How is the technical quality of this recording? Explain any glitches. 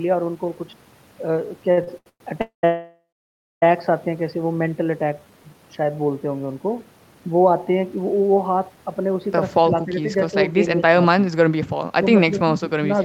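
The recording has clear network and echo-control glitches, concentrated in the first four seconds and again from about 9.6 s onward.

From 1.71 to 2.21 s the speech stutters and drags through five brief stalls. These are repeated stalls (stutter): late packets kept draining the jitter buffer, and the receiver stretched the last sound over 288 ms, the longest gap being 112 ms.

At 2.41 to 2.64 s and 2.65 to 3.63 s the sound holds as a fading buzz, then falls silent for 120 ms and 600 ms. These call audio freezes were likely caused by held-up packets emptying the buffer, inserting 218 ms and 970 ms of delay.

From 5.13 to 5.59 s the speech slows to 84% speed at unchanged pitch. This jitter buffer slow-down repeated pitch periods, adding 83 ms to rebuild the buffer's reserve.

From 7.96 to 8.77 s the speech sounds hurried, running at 109% speed with the same pitch. This jitter buffer speed-up trimmed roughly 70 ms of pitch periods to reduce excess buffered delay.

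At 9.64 to 9.99 s, 10.77 to 11.02 s and 12.31 to 12.89 s the speech dips briefly, by about 10, 15 and 10 dB. This is speech suppressed in double talk, likely caused by the echo canceller turning the talker down while the other side spoke.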